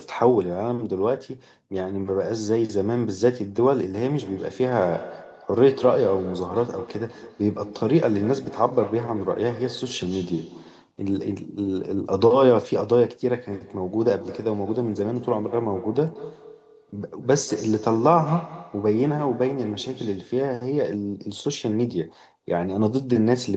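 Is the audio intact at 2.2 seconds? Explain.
Yes, at 2.2 seconds the speech is intact, with no dropout, glitch or other fault; it carries only the normal sound of a call path, including a treble limit around 8 kHz.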